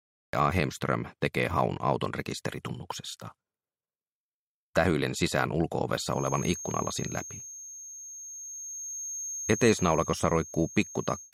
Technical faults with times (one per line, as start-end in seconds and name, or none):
0.00-0.33 cut-off start
6.07-11.33 feedback whistle